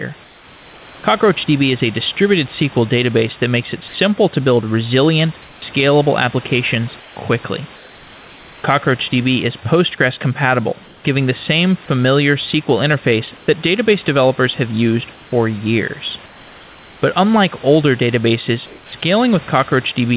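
Comfort noise in place of the background first appears from 0.24 to 1.04 s, when the room sound is replaced by a steady, featureless hiss about 3 dB quieter than the real background. This is likely discontinuous transmission: during silence the sender stops sending, and the receiver synthesises noise roughly matched to the background. The swap recurs at 5.42–5.62, 7.0–7.16, 7.76–8.64, 10.84–11.04, 16.26–17.02 and 18.66–18.92 s. Each time the level dips by about 1 to 5 dB, sitting about 26 to 30 dB below the loudest sound.

At 1.02 s, where the first stretch of comfort noise ends, there is an onset clipped by the voice detector. About 20 ms of the sound's beginning is missing, so it starts abruptly without its soft attack. This is likely because the sender's detector was slow to notice the sound resuming, and the receiver played synthetic noise in its place. Throughout, nothing is heard above 4 kHz, which fits a narrowband telephone codec, and the genuine room noise sits about 23 dB below the speech.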